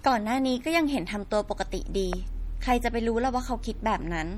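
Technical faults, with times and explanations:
Throughout: MP3 compression, and it's plainly audible here. The speech has that watery, swirly texture you get when the encoder runs short of bits and starts dropping the weaker frequency lines, which then flicker in and out from one frame to the next. Consonants and attacks lose their edges and smear. The amount of damage fits a low bitrate somewhere around 48 kbps, which is most likely the cause of what we're hearing.
2.13 to 2.15 s: loud pop, a single sharp click sitting on top of the speech, which carries on underneath without a break. It jumps out at roughly 15 dB above the surrounding level. It sounds like a sudden voltage step or spike got into the signal chain, likely from a plug, a switch, static or a driver glitch, and the circuitry after it shaped that spike into the short pop you hear.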